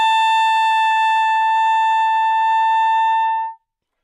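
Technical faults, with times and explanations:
Nothing stood out as a technical problem on listening to this sound.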